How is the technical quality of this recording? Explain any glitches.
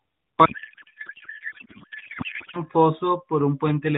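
The recording has one serious glitch: a codec payload misread from 0.46 to 2.57 s. The receiver unpacked AMR frames sent in octet-aligned format as if they were bandwidth-efficient, so the decoder read every field from the wrong bit position. The speech in that stretch becomes garbled noise and warble that barely tracks it. The speech around it is narrowband AMR mobile audio with nothing above 4 kHz and only light codec coloration.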